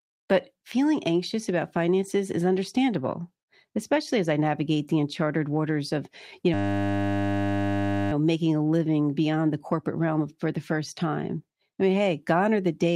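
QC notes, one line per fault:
6.54–8.12 s, system hang loop: after "uncharted waters of you" the sound collapses into a steady buzz at 100 Hz that lasts until "making a living beyond". The computer or audio driver stalled while the sound hardware kept replaying the same 10 ms stretch of its ring buffer, exactly, over 150 times. A loop that short repeats too fast to hear as a stutter, so it fuses into a tone. Playback resumes with little or no audio lost.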